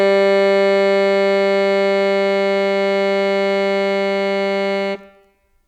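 Nothing in this bit of music trips the ear as a technical fault; it just runs along without any glitch worth pointing out.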